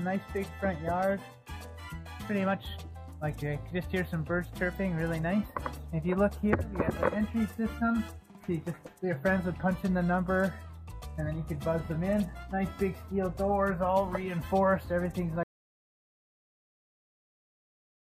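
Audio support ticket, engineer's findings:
Audio dropout to silence from 15.43 s through to the end of the file. Sound cuts off abruptly mid-flow, then silence: no room tone, no noise floor, nothing recovers. Probable component: input path ahead of the recorder, likely a lost device connection, failed link or accidental mute, while the encoder kept writing silence. Content after 15.43 s not captured; unrecoverable from this file. Check input connection and mute state at capture.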